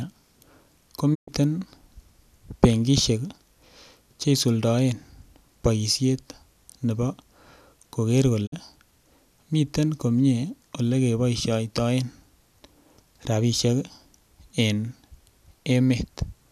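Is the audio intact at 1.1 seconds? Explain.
No. A digital broadcast dropout runs from 1.13 s to 1.29 s. The receiver stopped getting valid frames and muted, so the speech fades out over about 20 ms into roughly 120 ms of silence before good frames resume. The audio in that gap is gone, not delayed.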